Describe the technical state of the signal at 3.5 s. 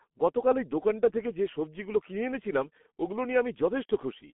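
At 3.5 s the speech carries G.723.1 codec damage, which runs through the entire clip rather than being a local event. The signal sits in a telephone band of roughly 200 Hz to 3.4 kHz. The heavy coarseness fits a 6.3 kbit/s stream coded in 30 ms frames, where the voice model updates too slowly to follow rapid articulation. The result sounds muffled and hoarse, with consonants smeared and indistinct.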